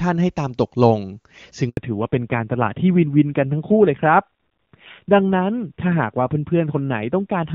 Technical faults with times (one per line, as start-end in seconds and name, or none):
1.69-1.77 handover gap
1.77-7.55 fallback to narrowband